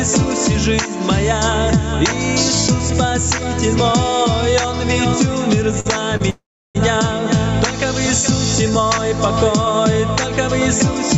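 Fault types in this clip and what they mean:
gain pumping: Loud and soft parts are pulled closer in level and the sound is squashed, with a swing of around 10 dB, likely from gain set far too high and a fast limiter clamping it. On a waveform the peaks sit flattened at one level while the quiet stretches between them visibly rise.
short stall from a late packet: At 5.80 s the last sound is held for 48 ms, and at 6.17 s for 29 ms, each with a slight buzz or dip before the audio picks up where it left off, nothing lost. A spectrogram shows brief smeared, repeated frames.
call audio freeze: From 6.30 to 6.77 s the sound stops moving on: 448 ms is inserted, a short fading buzz or hiss then 330 ms of silence, likely a jitter buffer running dry while packets were held up. The spectrogram shows a blank vertical band before the audio resumes unbroken.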